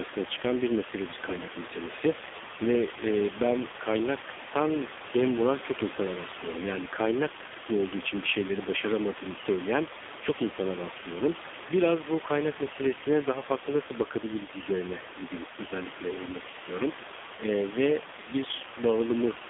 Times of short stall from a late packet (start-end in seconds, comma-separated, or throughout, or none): none